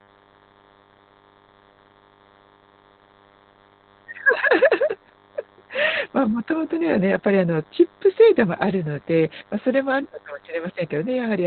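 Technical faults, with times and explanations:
Throughout, DECT cordless phone buzz. A thin, steady buzz sits under the speech, pulsing at 100 Hz and rich in harmonics. A nearby DECT handset or base station transmits a short radio burst every 10 ms. The audio circuit rectifies each burst into a click, and the regular clicks fuse into a buzz. It sits roughly 30 dB below the speech.
Throughout, Opus voice compression. The speech sounds muffled, hoarse and faintly robotic. Nothing survives above about 4.3 kHz, which points to Opus running narrowband in its SILK speech mode at a very low rate, around 8 kbps. SILK models the voice with linear prediction and codes the excitation coarsely at that rate. That gives the rough, buzzy texture. The missing upper band removes the crispness of consonants. The damage is heavy.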